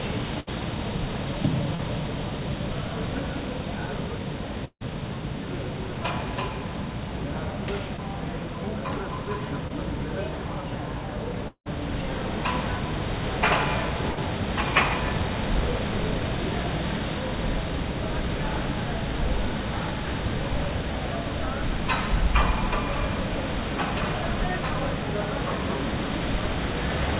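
At 0.40 to 0.49 s a burst of packet loss takes out about 60 ms of audio. The receiver extends the last sound for roughly 70 ms and turns it down, so it is heard as a held, fading buzz or hiss. The audio then picks up slightly further along, with that short stretch gone. The same thing happens at 14.12 to 14.19 s, where about 60 ms is lost and roughly 50 ms of the fading extension fills the gap.

Short concealed packet loss occurs at 1.75 to 1.81 s (40 ms missing), at 7.97 to 8.00 s and at 9.68 to 9.72 s (about 20 ms each). Each time, a few hundredths of a second failed to reach the decoder in time. The receiver continued the preceding sound and blended back into the real signal, so each spot is a brief smear or wobble rather than an audible gap.

A long network dropout is the likely cause of the two longer breaks at 4.65 to 4.83 s and 11.48 to 11.68 s. Over each stretch, about 160 ms and 180 ms of audio never arrived. 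The last sound is stretched into a fading buzz or hiss, which gives way to near-silence for about 70 ms and 80 ms respectively. The sound then returns with the missing portion skipped.

Throughout, nothing above 4 kHz is present, which fits a G.711 mu-law call path.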